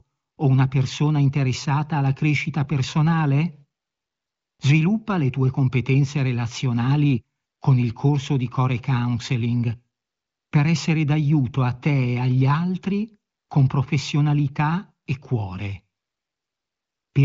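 No technical faults audible.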